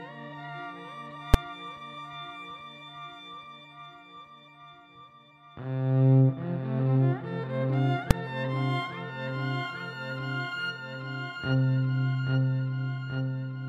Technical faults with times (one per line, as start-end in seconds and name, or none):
1.34 invalid numbers at full scale
8.11 invalid numbers at full scale